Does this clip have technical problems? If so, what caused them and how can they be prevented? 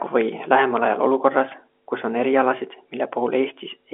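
No, this clip has no technical problems, so there is nothing to prevent.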